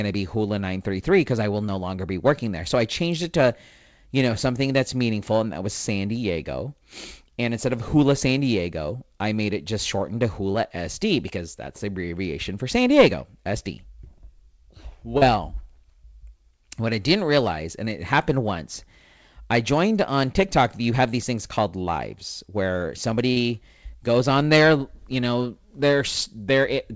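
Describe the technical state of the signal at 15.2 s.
A brief smear from 15.18 to 15.23 s is short concealed packet loss: about 40 ms never arrived, and the receiver papered over it by extending the preceding sound.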